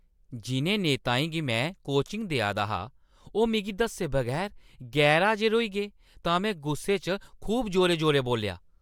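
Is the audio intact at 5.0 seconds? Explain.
Yes, the speech at 5.0 seconds is intact, with no dropout, click or other fault at that moment.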